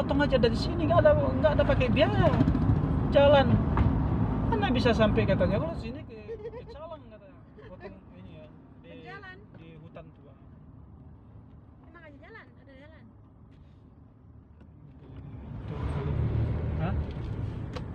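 From 5.5 to 6.12 s, the level drops about 20 dB with zipper noise: 1 dB steps at around 50 a second, each clicking, so a ticking rides the fade. From 14.78 to 15.96 s, a similar rise occurs. Unlike a smooth fader move, the steps are audible.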